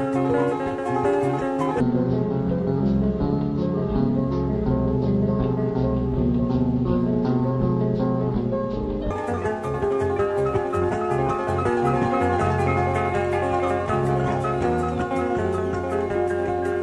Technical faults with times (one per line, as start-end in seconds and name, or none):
1.81-9.11 stereo read as mono